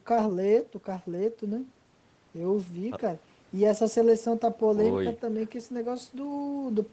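Nothing stood out on listening to this speech; the sound carries the band-limited character of a call path, with nothing above about 8 kHz.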